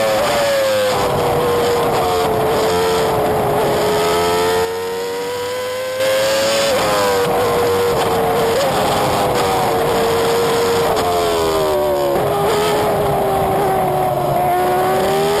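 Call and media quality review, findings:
Sudden gain jump, 4.65 to 6.0 s: level drops about 7 dB in one step, background noise dropping with it, then returns at 6.0 s. Likely cause: digital gain or bit shift applied without a ramp. Not AGC or compressor action, which would glide rather than step.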